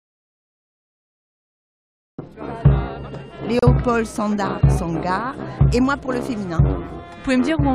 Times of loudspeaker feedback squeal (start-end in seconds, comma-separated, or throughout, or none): none